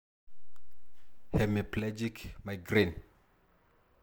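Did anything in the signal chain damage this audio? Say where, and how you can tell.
Yes. From 1.79 s to 2.68 s the speech drops abruptly by about 6 dB and then jumps straight back, which is the signature of one channel dropping out before the mono sum. When one side of the stereo pair goes silent, material common to both channels loses half its contribution, and anything present only on the lost side vanishes. The likely cause is an intermittent analogue cable or connector. A fader or gain move would ramp rather than step, and it wouldn't land so neatly on 6 dB.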